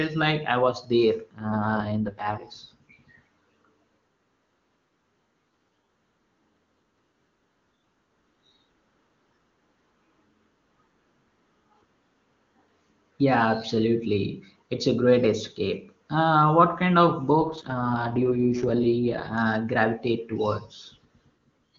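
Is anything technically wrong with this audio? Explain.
Yes. An AMR rate drop occurs twice, from 1.38 to 2.48 s and from 17.39 to 19.38 s, right after "what kind of". The network forces the AMR-WB speech codec to a lower rate to protect the link. The speech turns rough and synthetic without gaps or narrowing, which fits a fall from 23.85 to about 6.6 kbit/s.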